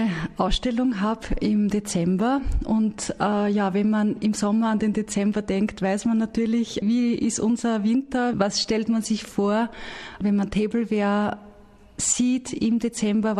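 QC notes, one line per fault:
No faults heard anywhere in the clip.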